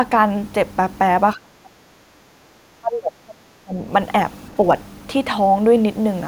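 Speech, with the talker repeatedly pushed down from 1.35 to 2.0 s, 2.19 to 2.51 s and 2.79 to 3.86 s, dropping by roughly 30 dB in the first and last stretches and around 15 dB in the middle one. The pattern is speech suppressed in double talk: an echo canceller likely mistook the near talker for loudspeaker echo while the far side was also talking, and attenuated the outgoing signal in chunks.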